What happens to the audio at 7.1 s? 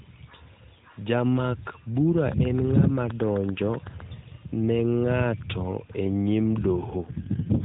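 At 7.1 s the speech is inside an AMR rate drop. It runs from about 6.98 s to the end of the clip at 7.64 s. The mobile codec switches to a much lower rate to spend more bits on error protection. The roughness fits a fall from around 12.2 kbps to 4.75 kbps. The narrowband range stays the same and there is no gap. The voice turns buzzier, rougher and more synthetic.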